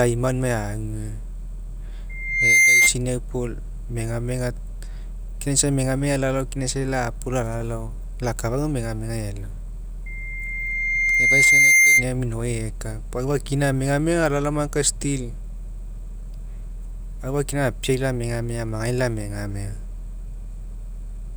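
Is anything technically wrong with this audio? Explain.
Yes. Loudspeaker feedback squeal occurs at 2.09–2.93 s and 10.06–12.06 s. The microphone re-picks its own loudspeaker, so a 2.1 kHz tone builds and howls roughly 10 dB above the speech.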